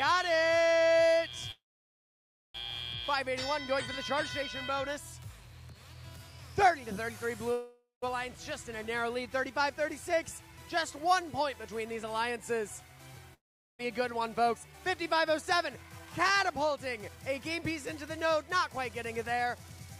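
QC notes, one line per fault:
1.51–2.56 s and 7.52–8.04 s, call audio freeze: the last sound trails off as a fading buzz into silence, then resumes where it stopped. Likely delayed packets emptied the jitter buffer, inserting gaps of about 1.03 s and 0.5 s with nothing lost.
13.34–13.81 s, long network dropout: the sound fades into about 0.4 s of silence, and about 0.46 s of audio is skipped when it returns, likely from packets that never arrived.
13.84–19.97 s, jitter buffer speed-up: playback runs at 108% speed at unchanged pitch and sounds hurried, as the receiver trims pitch-period slices, roughly half a second in all, to reduce the built-up delay.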